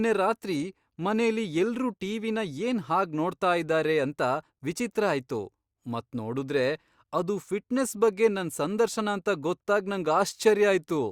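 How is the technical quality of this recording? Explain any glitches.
No technical problems are audible anywhere in this recording.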